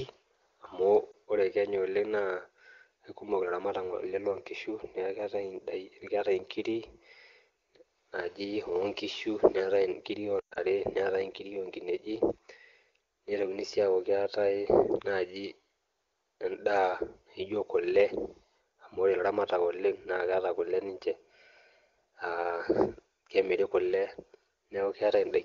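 At 1.12 to 1.14 s, lost AMR speech frames: a single dropped 20 ms frame, concealed by the decoder repeating the previous pitch and spectral parameters, gives a brief dip. From 10.40 to 10.59 s a longer burst, consistent with several frames lost across about 160 ms with a longest run of 120 ms, produces a sound that drops to near silence within two frames under wideband attenuation before the speech returns. The clean HD Voice coding suggests a high AMR-WB rate.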